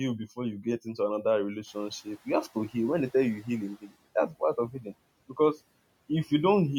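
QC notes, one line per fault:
1.65–3.91 s, noise suppressor catching up: after "you get into another" the room noise jumps about 23 dB and passes through with less reduction at first, then sinks about 12 dB as the estimate adapts over 2.26 s.
3.81–3.96 s, speech cut by the noise suppressor: just before "that's part of healing", the suppressor mistakes soft speech for noise, dipping it about 15 dB for roughly a tenth of a second.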